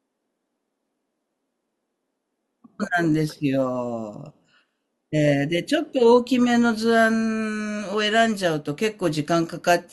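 No technical faults are audible.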